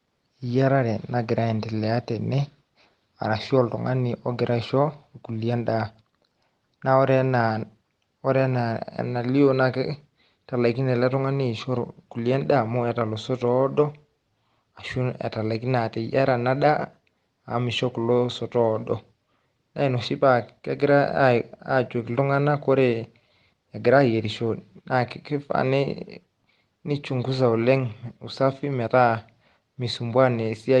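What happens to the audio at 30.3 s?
At 30.3 s the audio is intact, with no dropout, click or distortion at that moment, just the ordinary sound of the call path, whose Opus coding tops out around 12 kHz.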